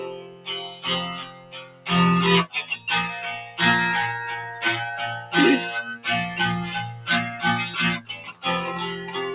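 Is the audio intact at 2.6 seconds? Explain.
No. At 2.6 s the audio is under a noise suppressor applied to music or sounds, a fault that runs through the whole clip. A speech-oriented suppressor treats steady tones, ambience and reverb as noise and pulls them down, so attacks pass while sustained parts and tails drop, with swings of around 10 dB. The result pumps and thins. On a spectrogram, sustained bands fade soon after each onset and tails are cut short; the waveform envelope dips and recovers unevenly. The band also stops at 4 kHz, which fits the G.711 A-law narrowband call path.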